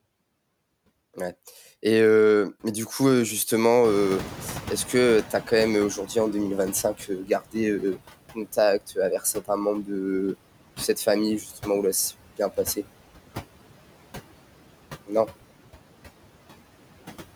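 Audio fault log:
Throughout, noise suppressor artifacts: the suppressor pulls steady-noise bands down by about 18 dB frame by frame, so the residual background sinks between phrases and rises under the speech.
3.84–7.03 s, noise suppressor catching up: after "du coup heu justement" the room noise jumps about 21 dB. The noise estimate lags, letting it through before it sinks about 14 dB over roughly 3.2 s.
7.25–7.55 s and 9.19–9.49 s, speech cut by the noise suppressor: the suppressor mistakes parts of the speech for noise, dipping them as much as about 13 dB for around a tenth of a second each, so they sound swallowed.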